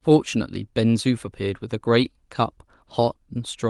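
No technical faults can be heard in this speech, which carries the ordinary coding texture of a WebRTC call path, with the top end rolling off around 12 kHz as fits an Opus stream.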